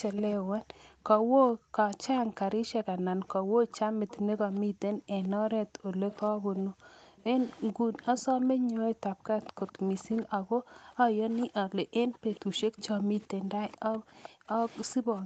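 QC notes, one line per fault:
0.17–0.34 s, 2.81–4.16 s, 5.24–6.22 s, 7.18–8.25 s, 9.44–10.28 s, 11.4–14.92 s: echo leak. A faint second copy of the speech trails the original by about 0.43 s, sitting roughly 15 to 20 dB down and loudest in the first and last stretches. The likely cause is a far end on loudspeaker whose echo canceller let part of the returned playback through, so that residue came back delayed and weakened.
0.36–15.26 s: background gated by the echo canceller. From just after the start to the end, the room tone keeps sinking and coming back instead of holding steady, with the deepest dips about 40 dB down. Whenever the canceller judged loudspeaker playback to be present, it pulled the microphone gain down hard, then released it, so the ambience pumps in and out. The gaps sit within the 8 kHz-limited call audio.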